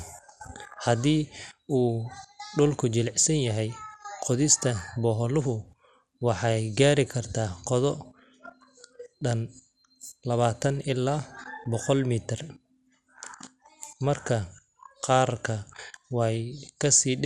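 A speech recording carries MP2 compression damage from start to finish: the sound is dull and muffled, with a gurgling, granular roughness that is plainly audible throughout. The likely cause is MPEG Layer II coding starved of bits, which fits a rate of around 80 kbps. On a spectrogram, the upper sub-bands appear as blocky strips that flicker on and off, above a hard ceiling where whole bands have been dropped.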